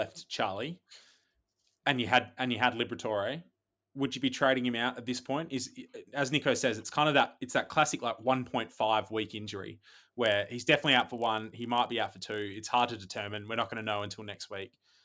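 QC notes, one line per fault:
10.24–15.04 s, resampler restarted on every block: the rate converter, likely going from 44.1 kHz down to 16 kHz, processed each 20 ms block in isolation, leaving a small error at every edge, heard as a 50 Hz buzz riding on the speech.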